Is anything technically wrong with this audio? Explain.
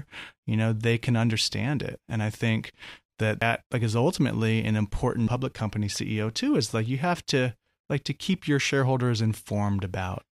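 Yes. Damaged data in a compressed stream occurs twice: at 3.42 s, between "I think that" and "like is ultimately an", and at 5.27 s, just after "is ultimately an important". Corrupted bytes make the decoder misread frames and lose sync, leaving a brief chirp or blip each time.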